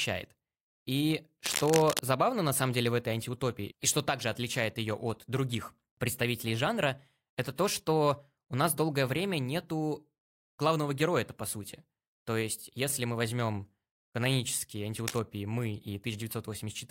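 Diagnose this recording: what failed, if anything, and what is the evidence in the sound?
The analogue wiring stage shows cable scratch noise. From 1.44 to 2.01 s, just before "забавно на самом деле", a dense, uneven rustling sits over the speech only a little below its level. A shorter, quieter burst follows from 14.98 to 15.19 s, right after "если мы возьмем канонические". This is likely a worn cable, connector or control being moved: its contact resistance fluctuates rapidly and adds noise. A single click or a steady hiss would sound different, and the irregular scraping texture confirms this cause.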